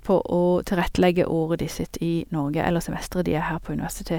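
Nothing goes wrong anywhere in this bit of speech, so there's no fault to point to.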